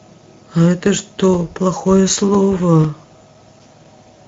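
Speech runs through Speex codec damage for its whole length, and the coding is plainly audible. The voice carries a hoarse, grainy roughness because the CELP excitation is starved of bits. Above 4 kHz the sibilance sounds like shaped hiss rather than real detail, and nothing remains above 7.8 kHz, which points to wideband Speex at a middle setting near 17 kbps. Unlike MP3 or AAC swirl, the roughness sits in the voice itself rather than in warbling high bands.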